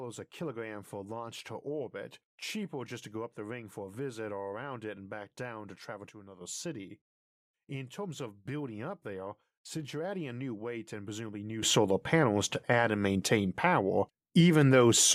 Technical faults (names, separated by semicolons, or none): sudden gain jump